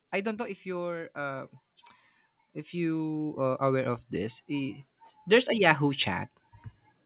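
From 0.63 to 1.58 s, then 2.52 to 6.09 s, automatic gain rising lifts speech and background together by about 4 dB, then about 11 dB. It is a gradual swell rather than a step, heard through a telephone-band path with nothing above 4 kHz.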